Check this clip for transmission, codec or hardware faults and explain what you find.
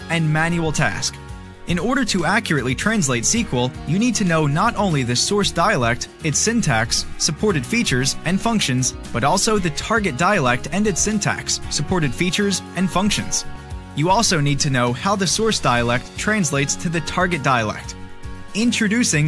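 Nothing in the recording stood out as a problem on careful listening.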